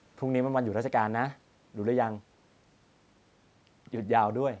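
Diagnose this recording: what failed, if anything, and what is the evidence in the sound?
Nothing failed in this recording: the speech carries only the expected traces of call microphone processing, with nothing above 8 kHz, and a room noise floor sitting about 39 dB below the speech.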